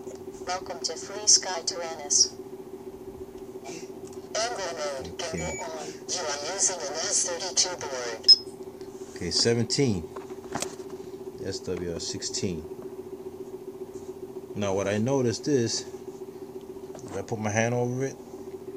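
No faults can be heard anywhere in the clip. There are no dropouts, clicks, level jumps or sudden changes in tone at any point.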